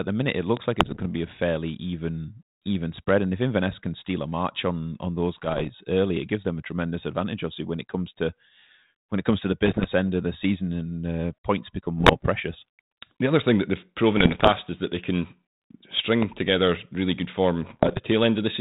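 Loud pops at 0.57–0.59 s, just after "the minute it", and at 16.22–16.25 s strike through this speech as single sharp spikes about 15 dB above it, likely from a voltage transient such as a switch or static discharge. Bit errors on an ADPCM link hit at 0.80–1.07 s, 5.35–5.71 s, 9.66–10.08 s, 11.98–12.29 s (after "and uh points become"), 14.17–14.51 s (between "other thing that they've" and "is that they can") and 17.63–18.00 s. On this 32 kbit/s G.726 path, flipped bits throw the decoder's step size and predictor off, so each burst rings on as rough crackle with brief jumps in level.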